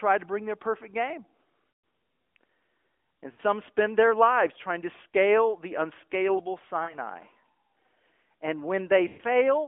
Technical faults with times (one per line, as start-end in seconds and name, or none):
1.70-1.84 lost AMR speech frames
3.32-3.40 lost AMR speech frames
5.10 lost AMR speech frames
6.84-6.96 lost AMR speech frames
9.08-9.22 lost AMR speech frames